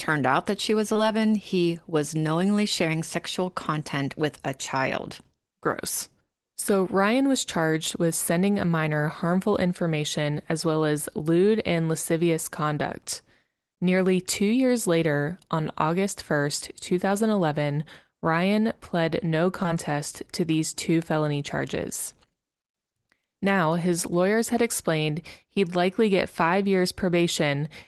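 A brief smear, like the sound stretching for an instant, comes at 0.93 to 0.97 s, right after "out that she was", and again as a shorter wobble at 19.63 to 19.66 s, after "pled no". Both are short concealed packet loss: about 20 ms of audio arrived too late for the decoder, so the receiver extended the preceding sound to cover the hole and blended back into real audio, all through a call path whose top end stops near 12 kHz.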